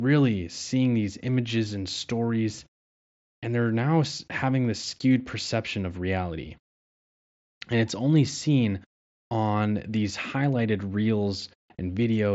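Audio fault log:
Nothing stood out on listening to this speech recording carried over a wideband Bluetooth headset link.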